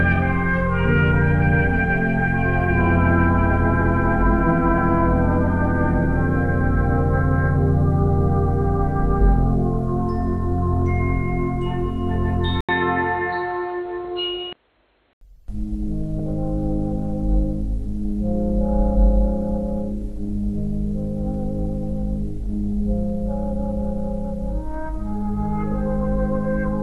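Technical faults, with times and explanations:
12.61–15.21 s, input switched to a poorer device. The sound cuts out for 80 ms, then turns dull and boxy. Nothing above 4.2 kHz gets through. Faint new background noise appears, roughly 45 dB under the signal. Loudness stays about the same. The likely cause is the system swapping mid-recording to a narrower-band microphone or a headset's call profile. That device brings its own tone and noise floor. At 15.21 s the full band returns.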